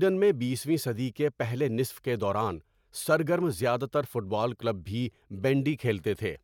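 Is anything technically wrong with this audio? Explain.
No, nothing technically wrong stood out on listening to this speech clip.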